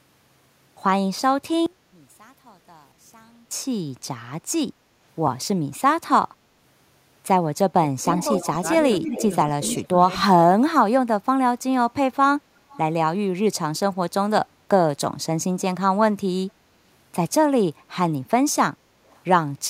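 One channel inverted, from 1.66 to 3.51 s: the sound drops by about 28 dB to a faint copy, likely because one stereo channel has reversed polarity and cancels the other when summed to mono.

Speech suppressed in double talk, from 7.94 to 8.14 s: the level dips by about 15 dB, likely because the echo canceller turned both its own talker and the loudspeaker echo down while both sides talked at once.

Echo leak, from 8.15 to 8.47 s: a faint copy of the audio trails the original by 228 ms at about 20 dB below it. This is likely loudspeaker pickup on one side that its echo canceller did not fully remove.

Echo leak, from 8.97 to 9.76 s: the same 228 ms copy returns much stronger, about 10 dB below the original, likely from the same uncancelled loudspeaker echo.

Speech suppressed in double talk, from 9.03 to 9.12 s: a slight dip of about 5 dB overlaps that echo, likely the canceller briefly attenuating during simultaneous talk.

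Speech suppressed in double talk, from 9.72 to 10.37 s: the sound falls by as much as 30 dB, likely as the canceller clamped down while both sides spoke.

Speech suppressed in double talk, from 10.54 to 11.93 s: the level drops by up to about 25 dB over roughly a second, likely from the same double-talk clamping.

Echo leak, from 12.73 to 12.79 s: a brief scrap of the 228 ms copy is heard, about 30 dB down, likely residual loudspeaker echo slipping through.

Echo leak, from 19.07 to 19.2 s: a barely audible copy appears at the same 228 ms delay, around 40 dB below, likely the same residual loudspeaker echo.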